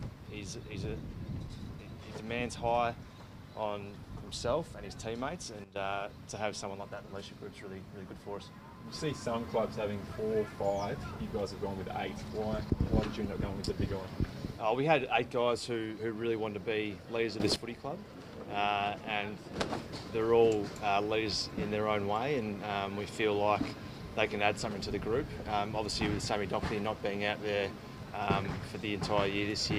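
At 5.64 to 5.76 s the whole sound and its background noise drop abruptly by about 12 dB, and at 17.4 to 17.56 s they jump back up by about 12 dB, each change landing as a sharp step rather than a fade. This is a sudden gain jump, likely caused by a digital gain setting being applied from one sample to the next with no ramp to smooth the transition.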